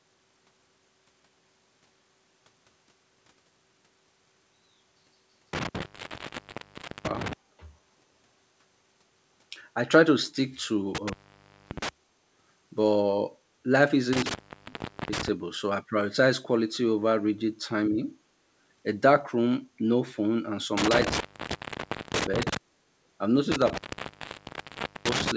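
An intermittent contact breaks the speech five times, at 5.53–7.33 s, 10.95–11.89 s, 14.13–15.28 s, 20.77–22.57 s and 23.52–25.32 s. A loose connection opens for about 1.23, 0.58, 0.76, 0.94 and 1.28 s respectively, dropping the signal to faint hiss with crackle where contact breaks and returns.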